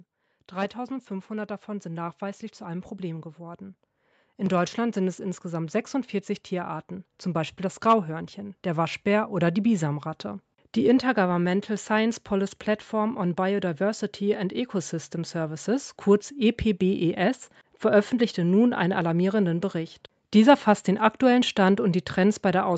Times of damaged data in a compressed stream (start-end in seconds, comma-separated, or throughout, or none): none